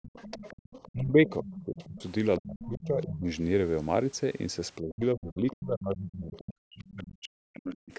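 The clip is speech from a call with two recurring faults. The other side's voice is leaking through at 0.02–0.92 s, 1.51–1.98 s, 2.37–2.41 s, 2.59–3.05 s and 6.88–6.92 s, sitting roughly 15 to 25 dB under the talker. It is likely loudspeaker echo that the echo canceller left in the microphone signal. Speech is suppressed in double talk at 0.93–2.02 s, 2.39–3.27 s and 4.81–7.93 s. The talker's level dips by some 25 dB, and by about 40 dB in the long final stretch, most likely because the canceller attenuated everything while both sides spoke.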